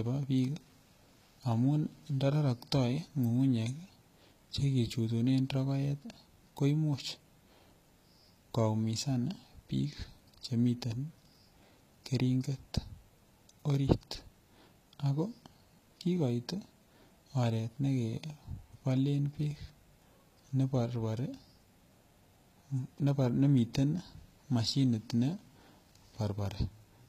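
Throughout the speech, the treble sounds synthetic. S sounds come out gritty and lispy, and the damage is plainly audible. Nothing survives above 14.9 kHz. The likely cause is HE-AAC compression, rebuilding high bands from copied lower ones, which fits roughly 20 kbps.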